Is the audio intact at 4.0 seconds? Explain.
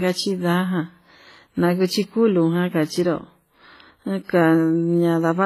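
No. At 4.0 s you're hearing the same smeared, double-coded texture that runs the whole clip, likely transcoding between lossy codecs, fitting a low-rate WMA pass re-encoded as HE-AAC. The second codec wastes bits on the first one's artefacts, so both kinds of swirl stack up, with nothing above about 14.9 kHz.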